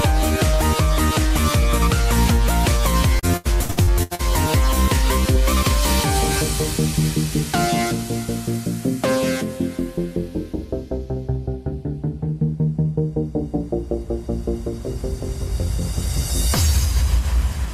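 Around 3.19 s to 4.21 s there's a burst of repeated packet loss, and you get that robotic sound. Over about a second the stream keeps dropping out in short holes, the longest around 83 ms, and each one gets papered over by stretching the last bit of sound. About 40% of that stretch is concealment rather than real audio, so it comes out choppy, with bits missing.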